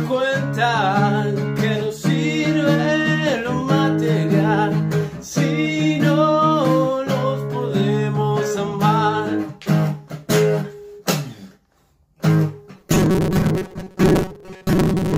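From 12.77 s to the end at 15.17 s, the sound turns into a rigid metallic buzz at 188 Hz. This is robotic sound from repeated short buffers. Audio likely arrived too seldom, so about half the signal is repeats of a 5.3 ms chunk.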